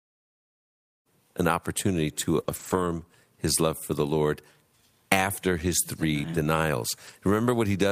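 At 2.39 s, just after "given an opportunity", a lost packet is rebuilt from error correction. The decoder played a low-bitrate copy carried in the next packet. There is no gap, but 20 ms turns rough and noisy.

From 2.43 to 2.47 s comes a short concealed packet loss. About 20 ms never arrived. The receiver extended the preceding sound to cover it, then blended back. It is heard as a brief smear.

From 2.47 to 2.85 s, right before "his love for the", a longer run is rebuilt from error correction. About 200 ms plays from the coarse backup copies. The sound grows grainy and noisy throughout.

Two more short rebuilt stretches follow, each about 40 ms. The first is at 4.03 to 4.09 s, just after "his love for the". The second is at 7.07 to 7.13 s. Both bring the same brief roughness.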